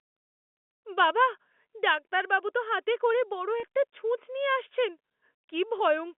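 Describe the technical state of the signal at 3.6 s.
A 30 ms gap from 3.60 to 3.63 s, which fits one dropped packet, was bridged by packet loss with pitch repetition after "তো হাতে করে বড়". The repeated pitch cycle sounds like a brief buzzy hold before "একটা ছুঁচ নিয়ে আসছেন".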